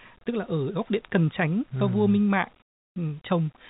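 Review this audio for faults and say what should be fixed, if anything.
Comfort noise in place of the background, 2.62 to 2.96 s: for 340 ms the real background, normally about 44 dB below the loudest speech, gives way to a steady, featureless hiss about 18 dB quieter. The sender likely stopped transmitting during the pause under discontinuous transmission, and the receiver synthesised shaped noise to fill the gap until speech returned. To prevent it, disable discontinuous transmission (DTX) or comfort noise on the sending side.

Onset clipped by the voice detector, 2.94 to 2.96 s: speech resumes abruptly, its first 20 ms missing, so the sound starts hard without its natural soft rise, and the synthetic hiss runs right up to that point. The sender's voice detector was likely slow to register that speech had started again, so the opening fragment was never sent and filler noise covered it. 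To prevent it, add a hangover or lookahead to the voice detector, or turn voice-activated transmission off.

Across the clip nothing is heard above 4 kHz, which fits the narrowband call path it passed through.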